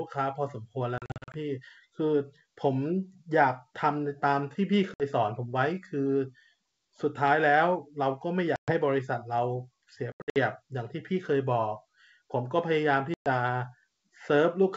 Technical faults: packet loss on an ADPCM call

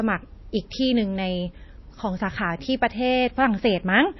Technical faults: MP3 compression

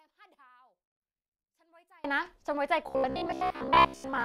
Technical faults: one channel inverted; robotic sound from repeated short buffers

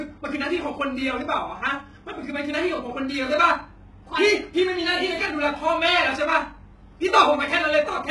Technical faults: HE-AAC compression

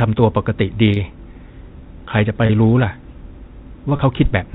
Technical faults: packet loss with pitch repetition

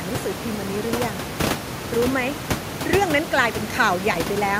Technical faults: none

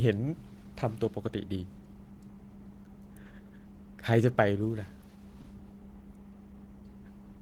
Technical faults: short stall from a late packet

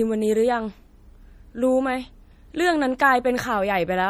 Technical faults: MP3 compression; pre-echo

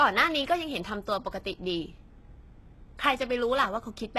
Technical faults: HE-AAC compression

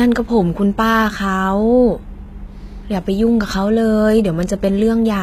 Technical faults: HE-AAC compression

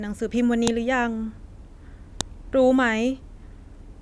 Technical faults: file header played as audio

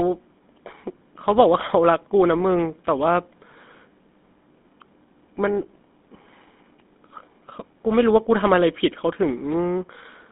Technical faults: GSM full-rate codec

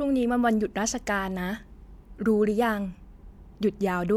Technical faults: none

